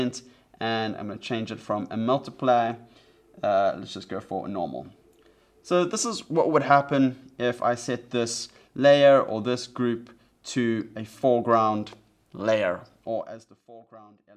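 No technical faults can be heard in this audio, so there is nothing to place in time order.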